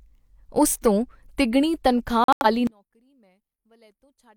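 At 2.24 s the speech drops into abrupt silence until 2.46 s. This is a corrupt frame muted fault: damaged compressed frames were rejected by the decoder and replaced with silence. The 0.22 s gap fits several consecutive frames, and timing resumes unchanged.

From 2.67 s to the end, the speech collapses by about 37 dB to a faint residue, the result of summing to mono. The likely cause is one channel inverted: reversed polarity cancels the centred material common to both channels, leaving only their difference.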